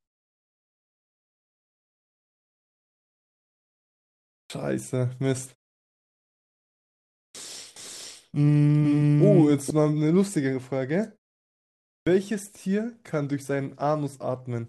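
The clip is speech with two faults. Three words lose their onsets through clipped start after a pause, at 4.39 s, 7.24 s and 11.96 s, after silences of 4.39 s, 1.77 s and 0.86 s. Each time about 0.11 s of the opening is missing, so the sound snaps in abruptly from silence. This points to an output device that sleeps during quiet stretches and needs that long to wake and lock again before it passes audio. From 7.76 s to 9.70 s there is a doubled audio track: a second full-band copy runs about half a second behind the original at roughly the same level. It carries no reverberant tail or room colour, and it begins and ends sharply, so it does not sound like an acoustic echo. The likely cause is the same audio being captured again through a slower path and mixed back in.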